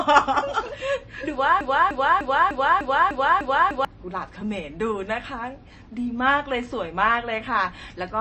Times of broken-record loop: 1.61-3.85

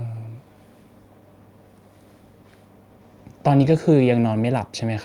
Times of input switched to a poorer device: none

